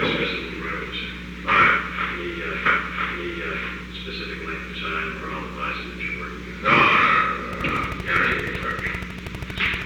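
A stream segment repeated at 2.65 s to 3.65 s: about 1.0 s of audio plays a second time, with a small blip where playback jumps back. This happens when the player fetches or queues the same segment twice, so that stretch is heard again. A train of clicks runs from 7.53 s to 9.83 s, with around thirty sharp, similar pulses at a regular 12.7 per second. They stand roughly 10 dB above the surrounding sound as a steady ticking, likely from electrical interference or a faulty connection or power supply.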